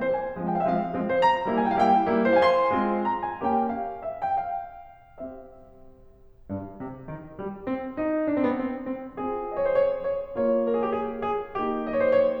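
A piece of music with no technical faults to point to. There is nothing here that needs a time or a cause.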